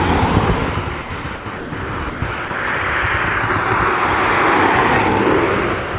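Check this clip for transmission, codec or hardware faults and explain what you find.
Six short gaps stand out between 1.02 and 2.50 s, likely sound dropped by the voice detector: 1.02 to 1.10, 1.22 to 1.24, 1.36 to 1.46, 1.58 to 1.72, 2.10 to 2.22 and 2.48 to 2.50 s. Each time, the sender judged the sound to be background and stopped transmitting, so the receiver filled 20 to 140 ms with steady comfort noise before the sound resumed. The call path's band limit is present throughout, with nothing above 4 kHz, which fits a narrowband 64 kbps telephone codec.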